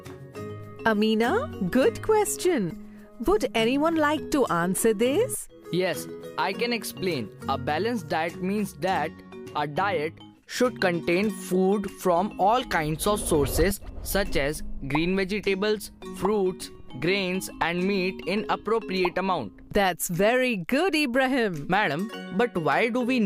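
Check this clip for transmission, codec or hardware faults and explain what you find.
One fault is present, crude rate conversion, from 0.0 to 11.3 s. The sample rate was changed by linear interpolation without filtering, which fits a 44.1 to 48 kHz conversion. Its repeating error sits roughly 30 dB below the signal, adding a gritty, inharmonic fizz that tracks loud and high sounds.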